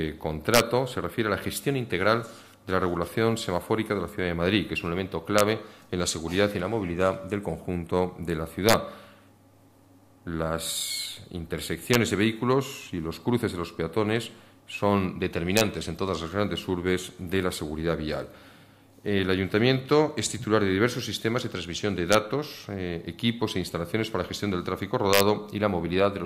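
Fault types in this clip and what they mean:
Integer overflow: violent, sharp cracks far harsher than clipping, at 0.54–0.60, 5.39, 8.69–8.73, 11.94, 15.57–15.61, 22.13 and 25.13–25.20 s. Loud peaks only about 1 to 2 dB past the integer limit wrapped to the opposite sign instead of being limited, jumping across the full range.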